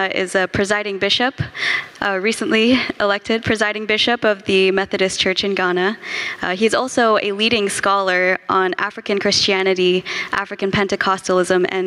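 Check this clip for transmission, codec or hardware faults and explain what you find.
The clip has one fault, gain pumping, and it runs for the whole duration. The gain swings by about 25 dB. Loud and quiet passages sit unnaturally close in level, giving a squashed, breathing character. This is likely caused by input gain set far too high for the microphone, with a fast limiter or compressor clamping down on every peak and releasing in the gaps.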